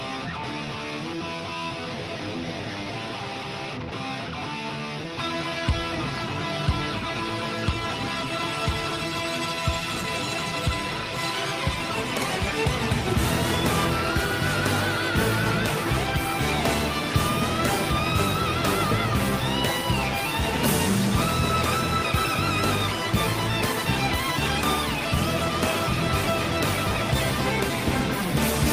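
At 3.89 s the sender's voice detector likely mistook the signal for background and paused transmission, as discontinuous transmission in Opus does. This sound dropped by the voice detector is a 20 ms gap where steady comfort noise replaces the audio before it returns.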